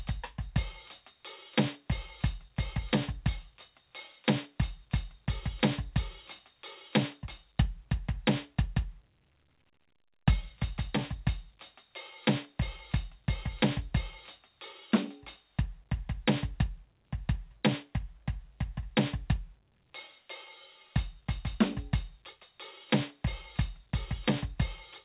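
No technical faults can be heard in this music, which has passed through a call's microphone processing and a narrowband call path where nothing is heard above 4 kHz, consistent with a G.711 A-law codec.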